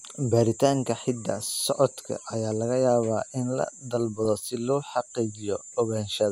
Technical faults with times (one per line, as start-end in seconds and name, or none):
4.25-4.40 DAB burbling